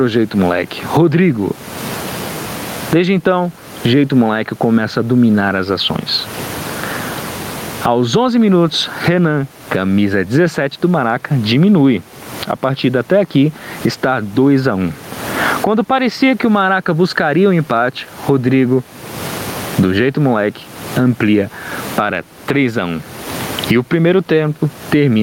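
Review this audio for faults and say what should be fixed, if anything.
Gain pumping is present throughout. The room noise sits about 34 dB below the speech, and the gain swings by roughly 25 dB. The likely cause is input gain set far too high, with a fast limiter or compressor clamping each peak. Set the microphone preamp gain lower and slow or bypass the fast limiter so it stops riding the background between loud sounds.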